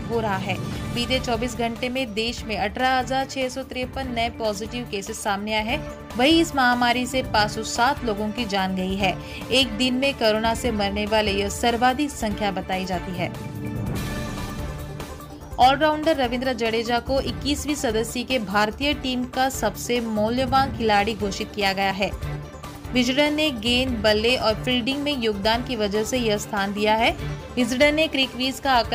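An overlap between stream segments, in a stream cut into 4-second segments, made the player trim audio it wrongly treated as duplicated. At 21.91 s roughly 16 ms of sound goes missing, and the waveform jumps across the gap, producing a brief click or skip.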